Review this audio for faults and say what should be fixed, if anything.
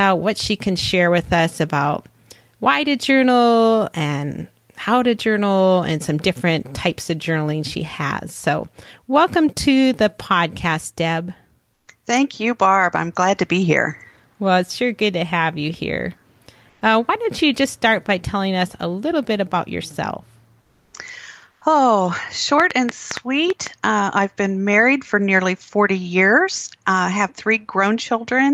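Comfort noise in place of the background appears at 11.73–11.87 s, 16.69–16.81 s, 20.61–20.93 s and 21.51–21.61 s. The real background gives way to a flat, featureless hiss. It drops by about 6, 3, 2 and 9 dB. This is likely Opus discontinuous transmission, with the receiver synthesising noise while nothing is sent.

An onset clipped by the voice detector occurs at 21.59–21.61 s. About 20 ms of the start is missing, so the sound begins abruptly, without its soft attack. The likely cause is a voice detector that reacted late. Comfort noise covers the gap.

A train of clicks runs from 22.60 to 23.68 s. There are about seven sharp pulses at an uneven pace, averaging 5.6 per second. They stand out at roughly 15 dB above the signal. They likely come from electrical interference or a faulty connection or power supply.

To prevent these, disable DTX or lower the voice detector's threshold and add hangover time, and shield or replace the interfering equipment or faulty connection.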